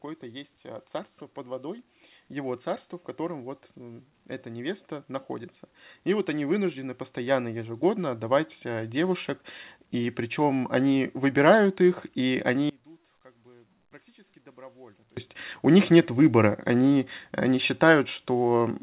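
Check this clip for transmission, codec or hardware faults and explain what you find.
One fault stands out in this speech, heard through a call path with nothing above 4 kHz, consistent with G.711 A-law. From 12.69 to 15.17 s the level drops about 29 dB, most likely because one channel is inverted: the shared centre cancels in mono, leaving a collapsed waveform and a faint spectrogram.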